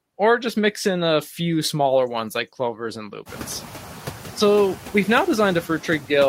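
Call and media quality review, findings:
Noise suppressor artifacts, throughout. Per-frame band gain cutting steady noise only about 4 dB; residue pumps between and under speech. Room noise jumps about 22 dB near 3.5 s, then sits about 17 dB below speech.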